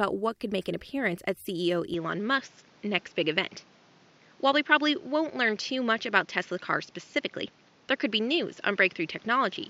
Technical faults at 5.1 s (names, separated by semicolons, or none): input switched to a poorer device